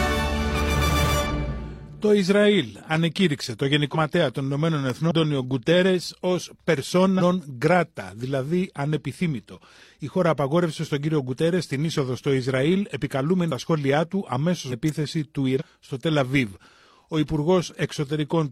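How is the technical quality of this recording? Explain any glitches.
The recording is marred by repeated dropouts where the audio lurches forward, plus two sharp snaps.

The compressed frames skipped fault appears seven times, at 1.26, 3.90, 5.07, 7.16, 13.47, 14.68 and 15.56 s. Each time the audio jumps ahead at an abrupt join. Between roughly a tenth of a second and nearly half a second of material vanishes at each jump, the longest at 14.68 s. The decoder is discarding whole missing or corrupt blocks, and the jump sizes fit a frame length of about 46 ms.

An electrical switching spike occurs at 4.90 s and again at 14.89 s. Each is a crisp snap or tight burst of clicks laid over the sound, lasting no more than about 10 ms. The likely source is a nearby switch, motor or static discharge arcing briefly, with the audio line picking up that interference. Because the snaps sit on top of the sound, the audio beneath them continues uninterrupted.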